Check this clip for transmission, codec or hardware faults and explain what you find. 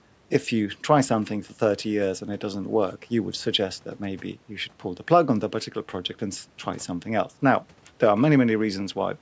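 No transmission, codec or hardware faults are present in the speech, which carries the ordinary marks of call microphone processing: a high-pass filter trimming the lowest bass and no content above 8 kHz.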